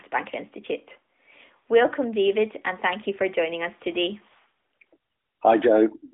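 This is a speech clip carried over a narrowband mobile phone line, and there's nothing here that needs flagging.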